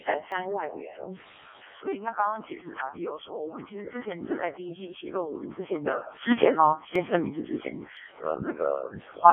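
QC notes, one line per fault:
throughout: Codec 2 vocoder. Speech rebuilt from pitch and envelope at about 0.7 kbit/s, band 250 Hz to 3.4 kHz, nothing above 3.5 kHz; heavily robotic, buzzy voice.
0.32 s, 6.96 s, 7.97 s: dropped buffer (overrun). Roughly 10 ms of samples likely overwritten before capture, sides spliced together; each heard as a small skip forward.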